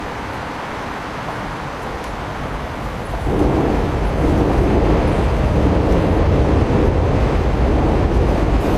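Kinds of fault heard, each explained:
Damaged data in a compressed stream: some of the encoded data got corrupted, so the decoder can't read a few frames properly, loses its place and hunts for the next valid frame header before carrying on. Here it shows up twice as a brief glitch, each lasting about 55 ms, first at 6.18 s and again at 8.60 s, near the very end of the clip.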